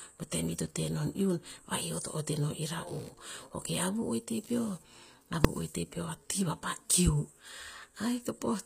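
From start to end, the treble of the speech sounds synthetic. S sounds turn gritty and metallic, and high harmonics fail to line up with the lower ones. The likely cause is HE-AAC compression at a low bitrate near 24 kbps, rebuilding the treble from copied lower bands.

From 2.87 to 6.32 s, a buzzing chirp runs under the speech. It pulses at roughly 70 Hz, about 30 dB below the speech. This is computer activity noise. Processor or graphics load shifts the shared ground of the audio circuit. The buzz follows the computer, not the speech.

At 5.45 s, a single loud bang cuts through. These are invalid numbers at full scale. A calculation produced infinite or invalid values, and the output was pinned at one extreme value for about 1.33 ms. That fits a block of about 64 samples. The block is so short that it sounds as one bang.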